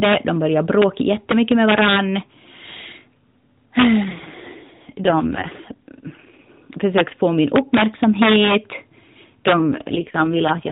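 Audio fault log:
Throughout, integer overflow: the signal is driven about 7 dB past the top of the integer range, and instead of being held at the limit the loudest peaks wrap straight round to the opposite sign. Only a small fraction of samples, well under one percent, get caught, but each one jumps across the whole range, so the loud moments in this speech crack violently, far harsher and spikier than ordinary clipping would sound.
4.04 to 6.52 s and 9.54 s to the end, AMR rate drop: the mobile codec, which sounds only lightly coloured at its normal 12.2 kbps, gets pushed down to 4.75 kbps, the kind of switch a network makes on a weak link to spend bits on error protection. The band stays narrowband and nothing drops out, but the voice goes rough, buzzy and synthetic. The first stretch recovers just before "försökte få min", and the second one never recovers before the clip ends.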